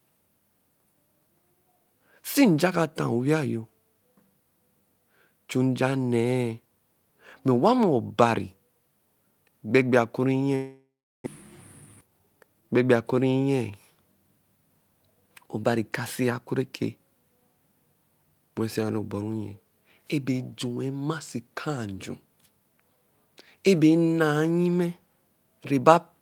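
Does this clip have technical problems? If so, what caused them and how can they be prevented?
Yes. From 10.55 to 11.28 s there is a long network dropout, likely caused by packets failing to arrive for a stretch. The last sound is held and smeared into a fading buzz, then about 0.36 s of silence follows. The audio then resumes with roughly 0.4 s missing. On a spectrogram this shows as a blurred, decaying tail running into an empty band, and the waveform shows a flat gap. Prevention: use a more stable connection, with forward error correction or redundancy to cover packet loss.

From 11.81 to 13.13 s there is a jitter buffer speed-up. After the dropout, delayed audio arrived in a burst and the buffer held a few hundred milliseconds too much. To shed that delay, the receiver repeatedly cut out pitch-period-length pieces, so the sound runs at about 121% speed with unchanged pitch and sounds hurried. 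A spectrogram shows normal harmonic spacing but events squeezed closer in time, and the waveform has many tiny splices. Prevention: let the jitter buffer drain more gradually, or limit how much delay it can build up.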